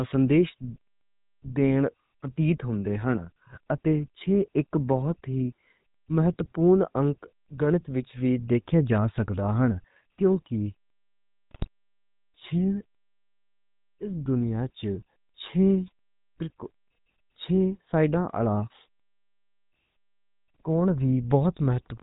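The whole clip carries the sound of the GSM full-rate codec. The speech has a buzzy, gravelly roughness that stays throughout. The codec models the vocal tract as a filter. It drives that filter with a coarse pulse train, keeping only one excitation sample in three. Nothing above 4 kHz survives, so the speech is dull and narrow. The damage is plainly audible, and it fits a 13 kbps full-rate stream.

From 11.51 to 11.68 s, GSM bit errors break in. The speech turns into squawks, pops and a brief gargle. Corrupted bits reached the decoder here. Wrong filter, pitch and gain values bent the spectrum and made the level jump, frame by frame. The burst lasts about 0.17 s. That fits roughly nine 20 ms frames hit in a row. The sound points to a few percent of bits flipped.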